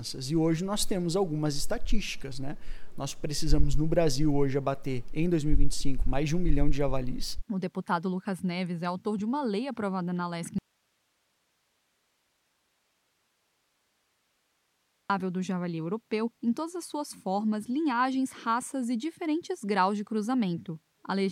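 At 10.59 s the sound cuts out abruptly. An audio dropout to a faint residue follows, lasting 4.5 s until 15.10 s. Only hiss fills the gap, about 50 dB down. The signal was likely lost upstream while the path stayed live.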